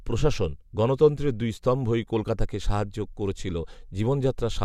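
No technical faults can be heard anywhere in the speech recording; the signal stays steady and continuous throughout.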